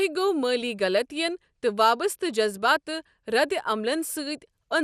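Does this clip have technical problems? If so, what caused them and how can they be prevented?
Yes. Throughout the speech there's a dull, gurgling, granular quality, with the top end flickering in and out. That points to MP2 compression at a low rate, likely around 80 kbps, where Layer II runs short of bits, switches off upper sub-bands and coarsely quantises the rest. To prevent it, encode at a higher bitrate or use a more efficient codec.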